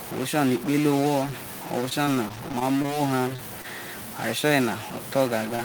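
From the very start and all the way through, there's a grainy or buzzy edge on the speech, and the pauses are filled with noise rather than going quiet. That combination points to a stuck bit, likely a single data line or converter bit jammed at one value and throwing half the samples off.

Between 1.89 and 2.95 s the audio turns choppy and robotic. That's repeated packet loss: a run of short holes, none longer than about 20 ms, each patched by stretching the previous sound, with roughly 13 percent of that span filled in this way.

After that come three isolated cases of short concealed packet loss, at 3.36–3.40 s, 3.62–3.66 s and 5.56–5.60 s. Each time about 20 ms of audio never arrived and the receiver extended the preceding sound to cover it, so you hear a quick smear or wobble rather than a clean gap.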